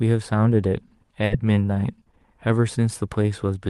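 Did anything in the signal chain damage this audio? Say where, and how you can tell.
Yes, a short stall from a late packet, twice, at 0.87 and 1.25 s: the jitter buffer ran dry, holding the sound 30 then 50 ms, nothing lost.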